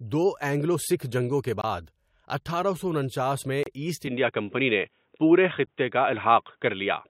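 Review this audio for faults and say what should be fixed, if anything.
Gap between stream segments: hard-edged silent holes at 1.61–1.64 s, just after "اینگلو سکھ جنگوں کے", and 3.63–3.66 s, after "اٹھارہ سو انچاس میں". Timestamps on consecutive segments, spaced two seconds apart, leave gaps the player pads with about 23 ms and 30 ms of silence. No speech is missing.

Input switched to a poorer device: from 4.07 s, right after "سو انچاس میں ایسٹ", to the end, the speech turns dull and boxy with nothing above 3.8 kHz. It shifts in level by around 5 dB and carries a new, faint noise floor, with no silence at the changeover. This likely reflects the recorder switching to a different microphone or a headset call profile.

Make segment timestamps continuous at the packager and lock the capture input to one device for the whole recording.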